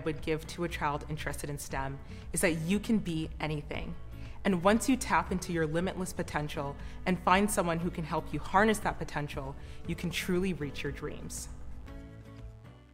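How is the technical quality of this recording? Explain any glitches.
The recording carries one technical fault, present from start to finish.

Mains buzz runs throughout the clip, sitting roughly 35 dB below the main sound. Something in the chain, such as a dimmer, a rectifier or an unshielded lead, is letting sharp switching spikes in on each half of the 50 Hz mains cycle. Those spikes spread into a ladder of 50 Hz harmonics climbing into the kilohertz range, so the result is a steady, raspy buzz rather than a smooth low hum.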